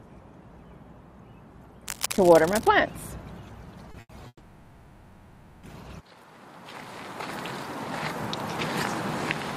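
From 1.87 to 2.68 s there is cable scratch noise: a dense, uneven scratching and rustling laid over the sound, sitting only a little below the signal's own level. The irregular, crackly texture is what a worn cable, connector or control produces when it is moved, its contact resistance jumping about rapidly and injecting bursts of noise. That is the likely cause here, and the disturbance lasts a little under a second.

Two short stalls from a late packet follow, at 3.91 to 3.97 s and 4.00 to 4.12 s. In each, a packet failed to arrive on time, the jitter buffer emptied, and the receiver held the last sound until the data turned up, then resumed at the same point. The first hold adds about 30 ms and the second about 90 ms. Nothing is lost; the sound simply hangs briefly with a faint buzzy or dipped quality, and everything after is pushed later.

A call audio freeze runs from 4.27 to 5.66 s. 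The last sound is drawn out as a fading buzz or hiss for about 1.36 s, including roughly 50 ms of outright silence, before playback picks up where it stopped. The likely cause is packets held up in transit long enough to drain the jitter buffer completely. No audio is missing, but a gap of well over a second has been inserted into the timeline.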